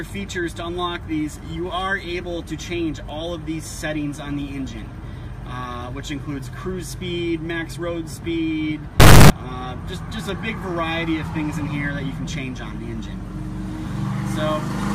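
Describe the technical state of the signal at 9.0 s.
Integer read as float, from 9.00 to 9.30 s. The sample data written as 32-bit integers is interpreted as 32-bit floating-point values, so each sample's bit pattern becomes an unrelated number, near zero, invalid or vastly beyond full scale. The output slams between silence and the clipping ceiling, and for those 0.3 s the audio becomes an extremely loud, harsh buzzing square wave that has nothing to do with the original sound.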